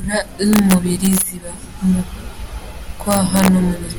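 A speech clip with integer overflow from 0.53 to 1.21 s and again from 3.11 to 3.48 s: peaks pushed about 2 dB, then about 1 dB, past full scale wrap to the opposite sign instead of limiting, producing sharp, violent cracks on the loudest syllables.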